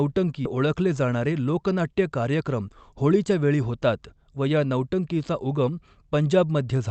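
At 0.45 s there is a skip ahead: roughly a second of speech is dropped and playback jumps straight to later audio with no gap. The waveform shows an abrupt splice, and the spectrogram a sudden break in harmonic patterns with no silence between them.

From 2.40 to 3.30 s a jitter buffer speed-up runs the speech at about 111% speed at unchanged pitch. Short pitch-period pieces, about a tenth of a second in total, are cut out, so it sounds hurried. Spectrogram harmonics stay level while syllables look compressed in time.

Throughout, the call codec's band limit shows as an empty spectrogram above 8 kHz.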